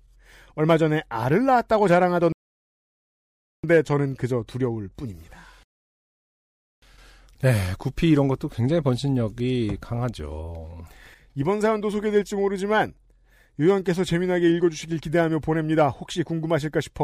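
Speech with two rebuffering stalls: playback drained its downloaded audio and halted, cutting to silence at 2.32–3.64 s and 5.63–6.82 s, then resuming exactly where it stopped, adding 1.3 s and 1.2 s.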